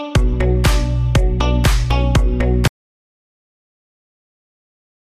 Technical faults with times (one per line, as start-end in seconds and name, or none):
2.67-5.11 audio dropout to silence